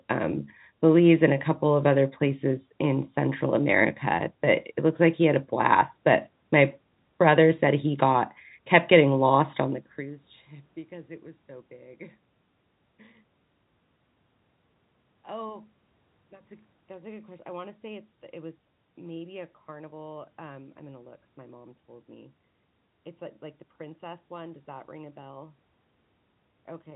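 No system faults are present: the speech sits in the G.711 telephone band with nothing above 3.8 kHz, room noise runs underneath, and the level shift near 9.5 s is the talker moving relative to the microphone.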